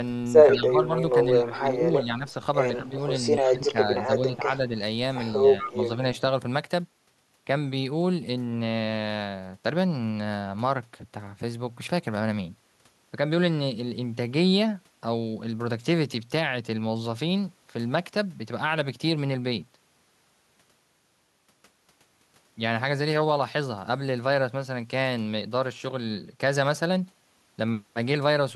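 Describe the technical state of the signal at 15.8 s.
At 15.8 s the signal is intact, with no audible fault at that moment.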